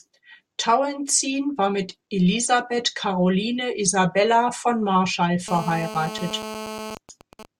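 From 5.48 to 6.95 s there's GSM phone buzz: a nearby phone mid-call, its 217 Hz radio bursts rectified into a harsh, raspy buzz about 11 dB below the speech. Right after, from 6.97 to 7.45 s, it becomes GSM signalling bursts, a quieter run of even ticks with a longer 217 Hz buzz twice a second while the caller stays silent.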